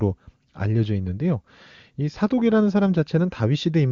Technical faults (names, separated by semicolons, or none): none